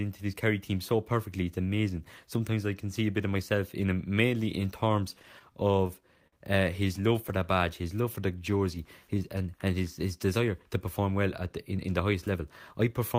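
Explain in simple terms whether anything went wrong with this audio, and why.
Between 5.19 and 6.34 s the speech hiccups in repeated stalls (stutter): network data kept arriving late, so playback ran dry eight times. Each time, the system stretched out the last bit of sound to cover the wait, about 131 ms in all, the longest single pause 52 ms. Nothing is actually lost, which sets it apart from dropouts. The sound catches and holds in small jerks rather than cutting out or going silent.

From 6.87 to 9.56 s comes a jitter buffer slow-down. The receiver's small store of incoming audio was running low, so it rebuilt it by repeating tiny slices of sound, adding 189 ms. The speech plays at about 93% speed, sounding drawn out but at the same pitch. Unlike the stutter, the drag is smooth and continuous, with no separate catches.

From 11.71 to 13.16 s the opposite happens, a jitter buffer speed-up. 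Too much audio had piled up waiting, so the receiver trimmed away tiny slices, roughly a tenth of a second in total, to catch up. The speech runs at about 107% speed and sounds hurried, yet the pitch doesn't rise, which is what separates it from audio simply played back too fast.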